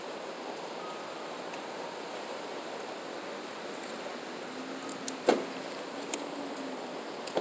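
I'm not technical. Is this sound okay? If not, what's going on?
Yes, no faults heard here.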